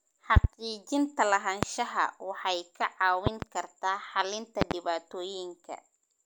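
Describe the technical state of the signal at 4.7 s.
At 4.7 s there is a loud pop, spanning about 4.62 to 4.74 s, just after "kartaa xalinta". It is two sharp thumps in quick succession, peaking roughly 25 dB above the speech, which carries on underneath. The likely cause is a voltage step from a plug, switch or static discharge, shaped by the downstream circuitry into a rounded pulse. Unlike a dropout, nothing is lost.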